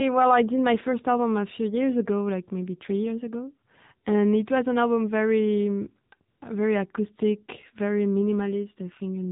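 Throughout, the speech passes through the AMR narrowband mobile codec at 7.4 kbps, losing everything above 4 kHz and taking on a plainly buzzy, synthetic quality. From 6.30 to 6.42 s, AMR comfort noise replaces 120 ms of real signal: speech frames stop, and a smooth, steady synthetic hiss switches in, then out.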